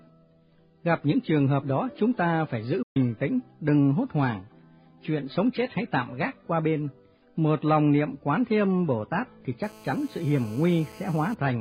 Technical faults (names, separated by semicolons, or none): digital broadcast dropout; GSM phone buzz